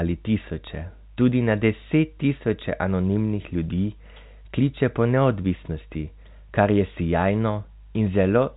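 Nothing goes wrong anywhere in this speech recording; it simply carries the usual narrow telephone sound of G.711 coding, with nothing above about 4 kHz coming through.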